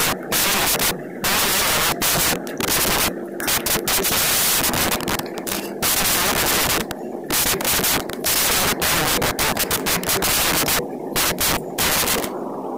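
From the first moment to the end, the whole speech clip suffers from a wrong sample width. The bytes seem to be grouped into samples differently from how they were stored, which fits 16-bit data being read as packed 24-bit. Most samples are built from mismatched bytes, so a loud hiss covers everything, with the speech buried underneath. That speech also runs at 1.5 times normal speed, with the pitch raised to match.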